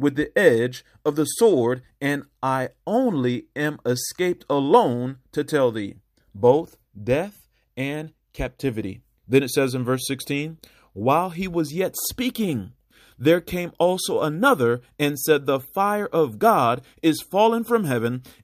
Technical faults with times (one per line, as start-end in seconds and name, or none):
none